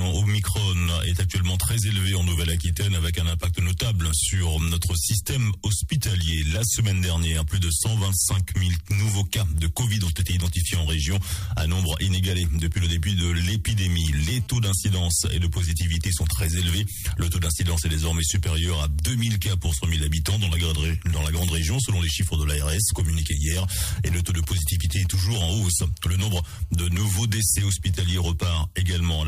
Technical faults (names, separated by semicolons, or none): GSM phone buzz; GSM signalling bursts